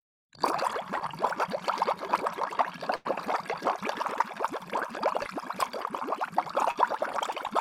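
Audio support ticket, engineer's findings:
Burst of packet loss at 2.95–3.07 s: audio continues the last sound and fades over roughly 95 ms, then jumps ahead with about 100 ms gone. Receiver-side concealment bridging consecutive lost or late packets. Check jitter buffer and network path.

Short concealed packet loss at 5.23–5.27 s and 6.71–6.77 s: brief smear or wobble as the receiver patches about 20 ms, then about 40 ms, of missing audio by extending the last sound and blending back. Same packet path, shorter drops.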